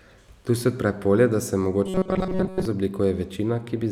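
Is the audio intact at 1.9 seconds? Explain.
No. From 1.86 to 2.65 s, just after "odpre polje da se", there is robotic sound from repeated short buffers: new audio likely arrived too seldom, so a roughly 5 ms slice was looped over most of the span, forcing a rigid, metallic 188 Hz buzz onto the speech.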